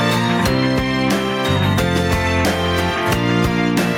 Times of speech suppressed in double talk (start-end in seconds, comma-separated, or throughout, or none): none